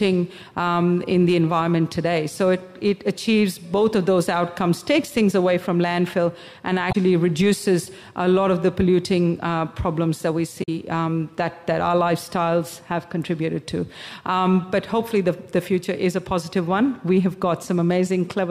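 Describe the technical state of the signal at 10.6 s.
At 10.59 s the signal breaks up into a brief burst of damaged data in a compressed stream, lasting until about 10.69 s. For roughly a tenth of a second the decoder is fed corrupted bytes, misreads the affected frames, loses sync and has to hunt for the next valid frame header. The result is a short chirp, squawk, click or hole where the stream breaks.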